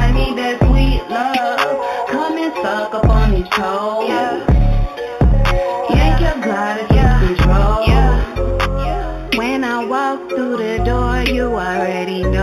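The audio was brought up to a higher rate, which points to an 8 kHz original raised to 44.1 kHz, by simply joining neighbouring samples with straight lines. That crude interpolation filters poorly, so throughout the clip the top of the original band is dulled and imaging from linear upsampling leaves a faint mirrored copy of the spectrum in the 4 to 8 kHz region, roughly 25 dB down, heard as a light metallic shimmer on bright, hissy sounds.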